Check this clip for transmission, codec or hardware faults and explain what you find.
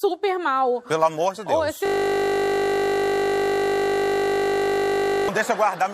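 A system hang loop runs from 1.86 to 5.29 s: the system froze while the hardware kept replaying a 20 ms buffer some 170 times, producing a steady 50 Hz buzz.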